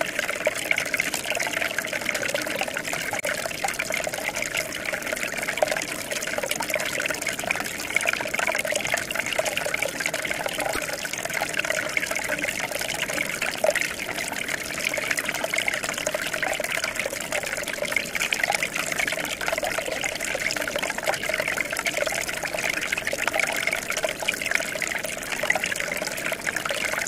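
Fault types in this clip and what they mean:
broken MP3 bit reservoir: five short glitches, 30 to 54 ms each, one or two 26.1 ms frames, where the sound jumps ahead, likely because cut frames left the next ones decoding the wrong borrowed bytes, unlike a dropout's clean silence.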